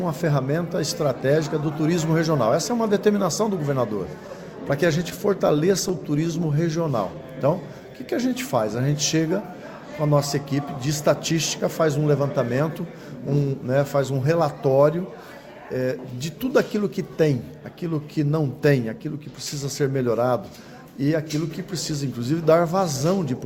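Between 4.68 and 5.91 s the audio shows scattered short gaps: about seven brief packet losses, none longer than roughly 15 ms, together covering around 70 ms. The receiver filled each hole by extending the last sound, so you hear small ticks or smears rather than silences. On a waveform these appear as short stretches where a cycle repeats too evenly; a spectrogram shows thin vertical seams where the harmonic texture briefly freezes. Directly after, from 5.98 to 8.30 s, comes a jitter buffer slow-down. The buffer was refilling its reserve by repeating single pitch periods and bits of pauses, adding 125 ms in total, so this span plays at about 95% speed with unchanged pitch and sounds slightly drawn out. The spectrogram keeps its harmonics at the same frequencies but stretches them horizontally, and the waveform shows runs of near-identical repeated periods. Later, from 11.31 to 12.82 s, there is a jitter buffer speed-up. 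Here the buffer held too much audio, likely after delayed packets arrived in a bunch, and trimmed short pieces of one or a few pitch periods to lower the delay. About 100 ms is removed, so the passage runs at about 105% speed at the same pitch and sounds a little hurried. On the spectrogram the features look horizontally compressed while frequencies stay put, and the waveform shows small discontinuities where periods were cut out.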